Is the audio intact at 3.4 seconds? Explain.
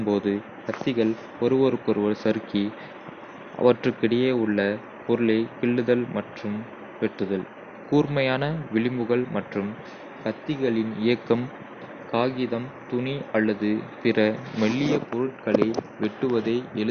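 No. At 3.4 seconds the speech is dull, with nothing above 6.5 kHz and a gurgling, granular edge, likely MP2 compression at a starved rate near 48 kbps.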